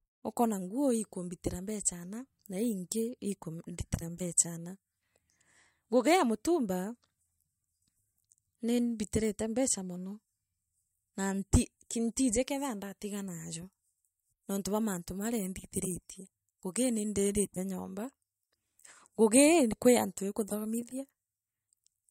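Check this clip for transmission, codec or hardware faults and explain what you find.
Nothing in the transmission path, coding or hardware produces an audible fault anywhere in this speech recording.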